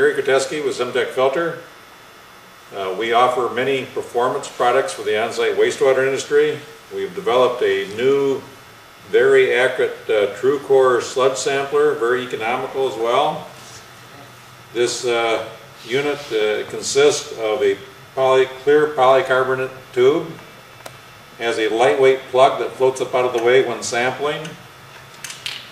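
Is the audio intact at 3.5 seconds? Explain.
Yes, the audio is intact at 3.5 seconds, with no dropout, click, distortion or other fault at that moment.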